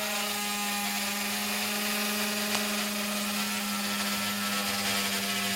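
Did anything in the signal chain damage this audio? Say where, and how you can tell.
Yes. Cable scratch noise from 2.51 to 2.74 s points to the analogue wiring: a dense, ragged crackle only slightly quieter than the sound, likely from a worn connector moving as its contact resistance jumps. A spectrogram shows broadband vertical streaks; the waveform shows jagged spikes.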